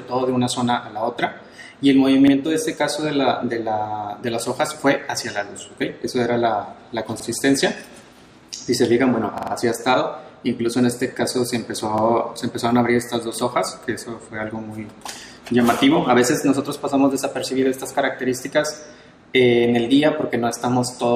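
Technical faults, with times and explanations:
2.28–2.32 s, 7.20–7.25 s, 9.38–9.52 s, 11.98–12.03 s, repeated buffer: a piece of about 46 ms plays again with a hard join, which fits a 2048-sample buffer. New audio arrived late, so the last block was replayed. At 9.38 s it repeats three extra times, a longer stutter.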